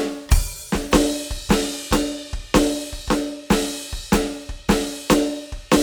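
No audible technical faults anywhere in the music; nothing to flag.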